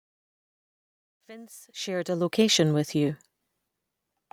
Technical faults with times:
0.00-2.60 truncation distortion on a fade

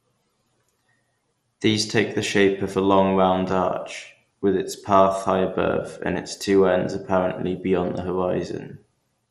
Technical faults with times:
0.00-9.31 MP2 compression

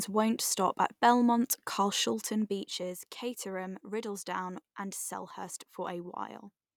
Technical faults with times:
2.08-3.00 zipper noise

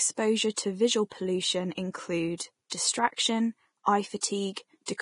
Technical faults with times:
0.00-5.01 Vorbis compression

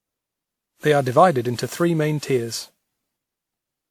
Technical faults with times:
0.00-3.91 generation loss

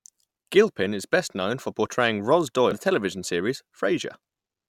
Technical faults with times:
0.36 damaged data in a compressed stream
2.71 damaged data in a compressed stream

